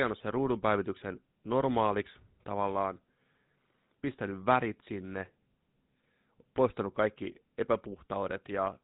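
From start to finish the speech carries GSM full-rate codec damage, and it is plainly audible. Nothing reaches above 4 kHz, so the sound is narrowband and dull at the top. The codec rebuilds the voice from a vocal-tract model excited by sparse, regularly spaced pulses, discarding most of the excitation detail. That leaves a buzzy, gravelly roughness on voiced sounds, a coarse texture that fits the old 13 kbps mobile-phone rate.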